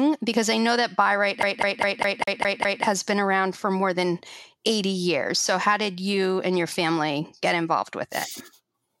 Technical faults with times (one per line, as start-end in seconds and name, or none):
1.43-2.84 CD stuck on one turn